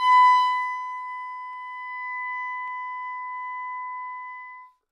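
At 1.53 s there is a single sharp click. It comes from dropped samples. A couple of samples are likely missing from the stream. The waveform jumps straight from one value to a later one. The gap is a tiny fraction of a millisecond, far too short to remove any sound. Only the sudden step is heard. The same click returns at 2.68 s. Each shows as a thin vertical line across the spectrum.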